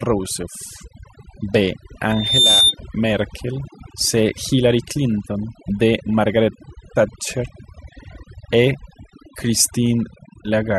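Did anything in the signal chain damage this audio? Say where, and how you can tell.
Yes. Throughout the clip the background falls to near silence broken by twinkling specks, and the speech has its quieter consonants and tails thinned out. That is overdone noise removal in the call-processing stage. A noise reducer set far too aggressively pushes each frequency band down or off whenever it sits close to the noise estimate. It removes the hiss, and along with it the low-level parts of the speech that fall near that threshold.

From 2.10 s to 2.75 s a single tone at 3.6 kHz swells up over roughly a third of a second and peaks at about 5 dB above the speech before it cuts off. This is a loudspeaker feedback squeal, arising at the playback end where a loudspeaker feeds back into the microphone. At 3.6 kHz the loop gain went above one, so that frequency kept reinforcing itself until it stopped.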